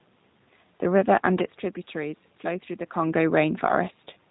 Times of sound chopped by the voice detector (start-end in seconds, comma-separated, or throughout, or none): none